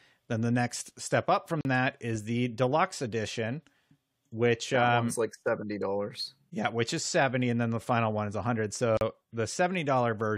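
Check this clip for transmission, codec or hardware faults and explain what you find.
There are two gaps at a join of encoded pieces in this speech. The first, at 1.61–1.65 s, falls after "the next step up" and before "that is the deluxe". The second, at 8.97–9.01 s, follows "final one is hundred". Each gap lasts about 40 ms. The pieces were encoded separately and spliced without trimming, so one piece's padded final frame and the next piece's start-up silence both remain. The speech stops abruptly, with smeared edges, then resumes where it left off.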